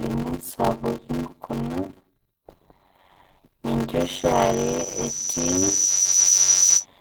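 Speech runs through the whole clip under a steady buzz near 93.8 Hz and plays back slowly, at 0.625 times normal speed, with the pitch about where it should be. That is a padded block size mismatch. A stage writes blocks shorter than the next one reads, and the remainder of each block is filled with zeros. This fits 512-sample reads carrying only 320 samples of audio. On a waveform, flat silent slivers recur at that rate, and a spectrogram shows thin vertical gaps in a regular comb. The speech also sounds hoarse, grainy and somewhat muffled throughout, even though energy reaches up to about 20.1 kHz. This is Opus compression, likely at a low bitrate near 16 kbps in its hybrid speech mode. Bands starved of bits are filled with folded or noise-like content rather than left empty, so a spectrogram shows smeared, speckled upper bands instead of holes. From 4.00 s to 6.86 s, just before "enatoki naji", a loudspeaker feedback squeal takes over. 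A single tone at 5.9 kHz swells over roughly a second and a half to about 10 dB above the speech, because the microphone is picking up its own loudspeaker and the loop gain at that frequency exceeds one. It appears as a bright horizontal line that thickens over time in the spectrogram.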